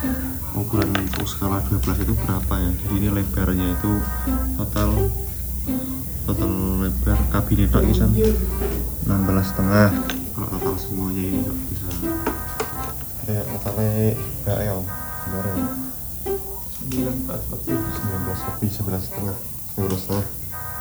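Low bit depth with noise shaping runs throughout: quantised to 6 bits, the rounding error pushed upward gives a steady, thin hiss climbing toward the top, about 10 dB below the sound.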